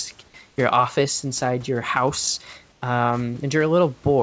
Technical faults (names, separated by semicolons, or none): comfort noise in place of the background